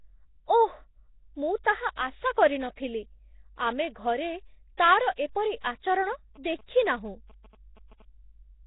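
Throughout, the speech has a rough, hissy, underwater smear with nothing above 3.8 kHz, most likely heavy Nellymoser compression at something like 16 kbps, with starved bands filled by noise.

From 6.12 to 8.02 s, GSM signalling bursts from a nearby phone get rectified into galloping dit-dit-dit buzzes at about 217 Hz, sitting roughly 25 dB below the speech.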